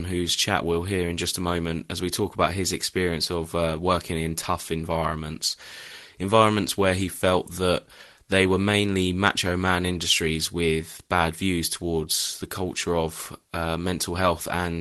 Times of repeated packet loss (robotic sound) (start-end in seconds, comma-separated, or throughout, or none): none